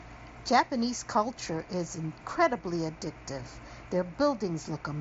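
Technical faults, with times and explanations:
No faults found; the speech carries the band limit of a Bluetooth mSBC headset path, with nothing above about 7.8 kHz and a faint grain on louder passages, as expected of that codec.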